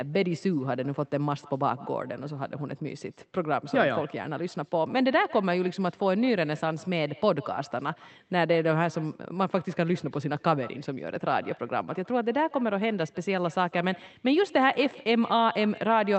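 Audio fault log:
Throughout, echo with no canceller: every stretch of speech is followed, after something like 150 ms, by a fainter copy about 22 dB down that sounds thinner than the direct signal. The far end is playing the call over a loudspeaker, its microphone recaptures it, and no echo cancellation removes it, so the talker's own voice returns after the network round trip. The echo shares the call path's 8 kHz upper limit.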